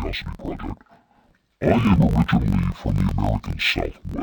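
A speech clip with interleaved audio read as planar throughout. Every block of about 21.8 ms has its alternating left and right samples split into halves, so each channel plays at half speed within the block. The speech sits an octave low, yet its overall pace is unchanged, which separates it from a sample-rate mismatch, where pitch and tempo drop together. A choppy buzz at about 46 Hz, the block rate, also runs throughout.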